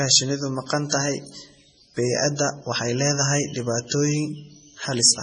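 MP3 compression throughout: treble stops at 10.1 kHz and weak bands flicker between frames, giving heavy watery swirl, likely from a bitrate near 24 kbps.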